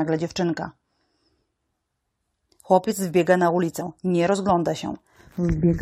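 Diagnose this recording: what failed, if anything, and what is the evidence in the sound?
The failure is in the codec stage, from damaged data in a compressed stream. At about 3.80 s there's a very short glitch, gone almost as soon as it starts. That's what happens when a stretch of the encoded file is corrupt. The decoder misreads or rejects the bad frame, loses its place, and skips ahead to the next valid frame header before carrying on.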